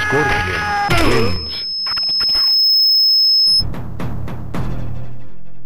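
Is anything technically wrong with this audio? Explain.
Yes. Loudspeaker feedback squeal runs from 0.55 to 3.65 s. A microphone is picking up its own loudspeaker, and the loop gain tops one at 5.2 kHz. That tone swells over about two seconds into a piercing squeal, roughly 5 dB above the surrounding sound.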